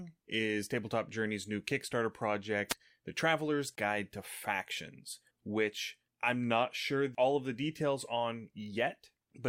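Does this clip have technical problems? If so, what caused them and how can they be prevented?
Yes. A wireless microphone noise hit at 2.69–2.74 s is a brief swish of static: the radio signal faded through reflection cancellation, letting receiver noise cover the speech. Use diversity receivers and keep clear line of sight to the antennas.

A gap between stream segments at 3.75–3.78 s leaves a hard-edged silent hole of about 23 ms where segment time stamps failed to meet, fitting 6-second segments. Align segment time stamps exactly when packaging the stream.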